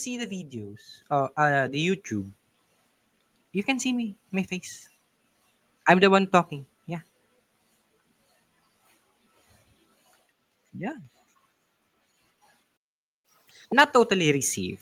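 At 1.02 s the microphone volume is stepped up: the call software judged the input too quiet and raised the device gain in a single jump of about 7 dB. Voice and room noise rise together abruptly, just before "uh uh the".

From 10.92 to 11.05 s the level of the speech drops by about 6 dB and then recovers. This sudden halving of the common signal is the signature of one channel dropping out, likely one side of a stereo pair lost before the mono sum.

At 12.76 s the sound cuts to silence for 470 ms, until 13.25 s. This is a playback stall, likely the player starving for data or its thread being blocked, so output halted mid-phrase before resuming.

From 13.25 to 13.72 s the player does a catch-up at higher speed, resampling its backlog at 2.0 times normal rate. Speech runs double-fast and pitch climbs by roughly ten semitones, then snaps back to normal once the lost time is recovered.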